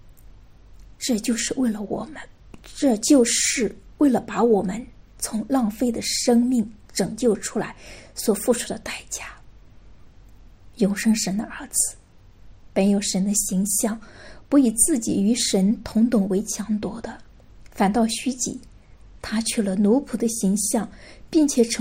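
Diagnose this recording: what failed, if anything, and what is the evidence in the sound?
Nothing in the signal chain, from analogue wiring through conversion, buffering, codec, network, storage and playback, leaves an audible trace of failure anywhere in the recording.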